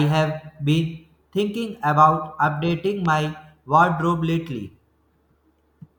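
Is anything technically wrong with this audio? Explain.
Yes. A loud pop at 3.06 to 3.08 s, likely a voltage pulse from a switch, plug or static, adds a single sharp thump, about 5 dB above the speech, which continues underneath.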